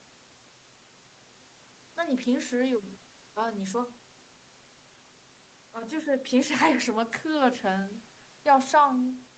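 No technical faults can be heard in the speech, which has the band-limited character of a call path, with nothing above 8 kHz and a coding texture that fits an Opus codec at around 32 kbps.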